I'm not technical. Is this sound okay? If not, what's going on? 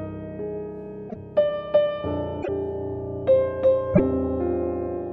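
No. Pieces of the MP3 file went missing, most likely breaking its bit reservoir, so brief chirps or gaps jump ahead at 1.09, 2.42 and 3.93 seconds.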